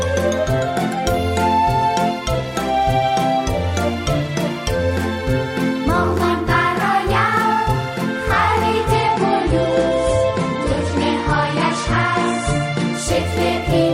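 At 8.94 s the sound abruptly loses its top end and stays dulled until 12.94 s, a four-second stretch typical of an adaptive stream at a lower bitrate. The stream switched to a cheaper encoding when throughput fell, which fits a drop from 128 to 40 kbit/s MP3. Codec artefacts rise, with no gap at either switch. A spectrogram shows a flat ceiling near 10.5 kHz across that span, while the waveform stays continuous.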